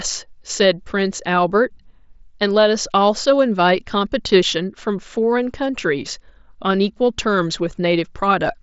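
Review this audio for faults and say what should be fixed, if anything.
There's one spot of concealed Bluetooth headset packet loss at about 5.22 s. It sounds like a single lost packet, roughly 7.5 ms of audio, between headset and phone. The receiver bridged the gap by repeating the best-matching piece of the waveform just before it, so it's almost invisible. The mSBC wideband link carrying it keeps the band-limited, slightly grainy character. To prevent it, keep the headset close to the phone and away from Wi-Fi congestion.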